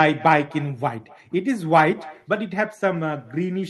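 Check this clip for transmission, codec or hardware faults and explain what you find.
One fault, present throughout: echo with no canceller. The far end is replaying this speech over a loudspeaker into an open microphone with nothing cancelling it. Roughly a third of a second after every phrase comes a faint, thin copy about 22 dB below the original.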